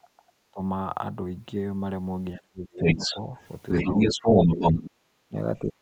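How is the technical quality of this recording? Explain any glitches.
The recording has clear technical problems from echo cancellation on a two-way call.

Speech suppressed in double talk occurs at 0.0–0.6 s, 2.35–3.38 s and from 3.82 s to the end. The speech dips or chops out, by about 30, 35 and 20 dB at its deepest. This is likely because the echo canceller turned everything down while both sides spoke. On a waveform the envelope shows sudden notches, and on a spectrogram the energy goes dark.

The other side's voice leaks through from 2.78 to 4.9 s as a second voice roughly 10 dB below the main speech. The echo canceller likely left residual loudspeaker echo, which appears as a separate harmonic pattern on a spectrogram.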